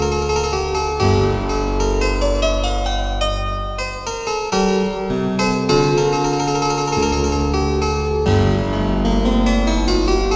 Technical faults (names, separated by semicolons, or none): short concealed packet loss